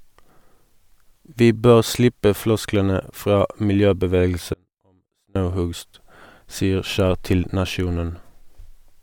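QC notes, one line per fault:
4.54–5.36 s, audio dropout to a faint residue: the speech cuts abruptly for about 0.82 s, leaving only a faint trace roughly 35 dB down, likely a brief signal loss with the path still live. The waveform shows a sharp-edged near-flat gap, and the spectrogram a dim band between hard vertical edges.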